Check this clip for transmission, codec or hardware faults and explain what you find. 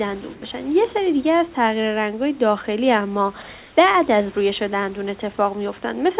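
Two short patches of comfort noise in place of the background stand out, heard through a call path with nothing above 4 kHz, which fits G.711 A-law at 64 kbps.

From 0.34 to 0.42 s and from 3.58 to 3.76 s, the room noise turns smoother and changes tone, about 2 dB quieter in the first pause and about 2 dB louder in the second. The likely cause is discontinuous transmission: the sender stopped sending during pauses, and the receiver filled them with synthetic noise shaped to imitate the background.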